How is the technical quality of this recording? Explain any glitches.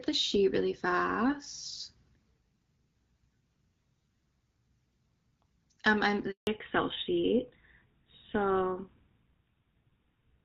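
The quality drops partway through: a short dropout is followed by a lasting loss of bandwidth, while the opening six seconds carry the light wideband coding typical of HD Voice, consistent with AMR-WB at about 12.65 kbit/s.

Handover gap, 6.31 to 6.47 s: the call was passed between networks and no speech frames arrived during the switch. The speech fades within a few tens of milliseconds and leaves 160 ms of silence, and whatever was said in that moment is gone.

Fallback to narrowband, from 6.47 s to the end: after the handover the call lost HD Voice and dropped to an older narrowband codec, which fits GSM full rate. Nothing above 4 kHz remains, so the speech sounds duller, boxier and rougher than before.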